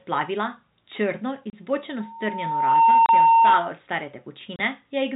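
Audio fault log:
1.50, 3.06 and 4.56 s, packet loss filled with silence: a single packet went missing each time, leaving 30 ms holes of dead silence with hard edges in the speech.
2.00 to 3.74 s, loudspeaker feedback squeal: the microphone re-amplified its own loudspeaker, so a 912 Hz tone swelled over most of a second to roughly 15 dB above the speech.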